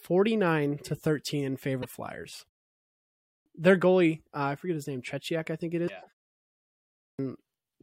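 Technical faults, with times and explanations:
1.82–1.85 s and 5.87–5.90 s (just after "I think it"), broken MP3 bit reservoir: a short glitch as the audio jumps ahead. The likely cause is dropped frames, with the following 26.1 ms frame decoding another frame's borrowed bytes.
2.98–3.46 s and 6.74–7.19 s, clipped start after a pause: after silences of 0.57 and 0.69 s, the first 480 and 450 ms of speech are swallowed while the output wakes, so "their goalie" starts abruptly. Unlike the reservoir glitch, nothing garbled sounds; the onset is simply missing.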